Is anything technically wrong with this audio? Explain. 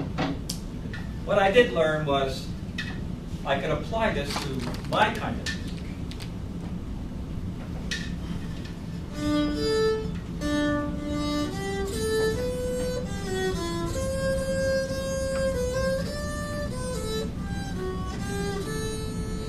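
No, nothing technically wrong can be heard in this audio. There is no fault to point to at any moment in the clip.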